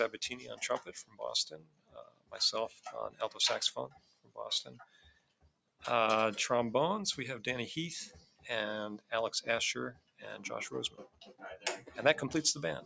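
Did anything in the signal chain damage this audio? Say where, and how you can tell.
Yes. Noise suppressor applied to music or sounds, in call processing: level swings of around 20 dB throughout, with cuts at 0.13–1.21, 1.52–2.34, 2.69–3.21, 3.88–5.84, 8.12–8.47, 9.93–10.24, 10.89–11.43 and 11.81–11.97 s, sinking held sound and tails by up to about 18 dB while attacks survive.

GSM signalling bursts, 10.52–12.18 s, in the analogue wiring: a nearby 2G phone's radio bursts get rectified, giving galloping ticks and 217 Hz buzz about 15 dB below the sound.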